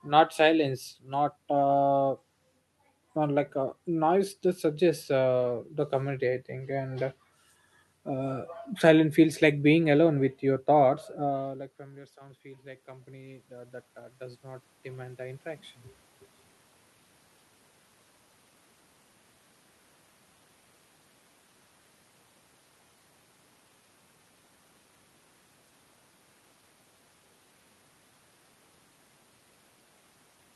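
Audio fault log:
11.32–15.74 s, automatic gain rising: after "alone with your thoughts" the level drops, then gain climbs about 11 dB, swelling the waveform envelope and noise floor together.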